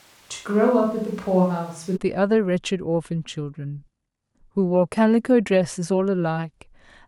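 From the start until 1.95 s, the speech sounds roomy, hollow and thin in the bass, with room noise about 30 dB below it. This is likely a switch to a distant microphone. Unlike added reverb, the close sound returns abruptly at 1.95 s, at a similar level.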